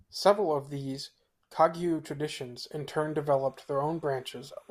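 From 2.94 s to the end, a faint, steady chirping warble sits far below the speech, flipping between pitches around 1 and 2 kHz. This is timecode bleed: a 29.97 frames-per-second linear timecode signal, a square wave, leaking into the audio from a neighbouring track or cable.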